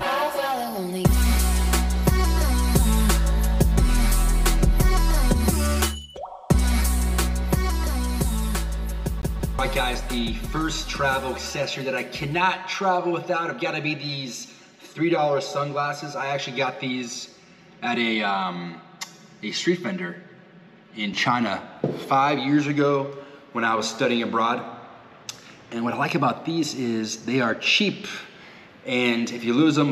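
From the start to 21.1 s the sound is hollow and phasey, with evenly spaced notches beginning near 100 Hz. That is channel delay (comb filtering): one channel runs roughly 5 ms late before mono summing. Between 9.22 and 9.59 s a 185 ms fragment stutters twice with brief mutes, a CD stuck on one turn as the laser jumps back at a scratch.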